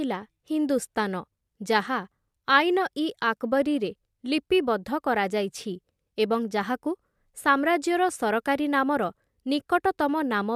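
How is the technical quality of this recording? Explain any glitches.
Listening to the recording, I didn't notice any technical problem or glitch at any point.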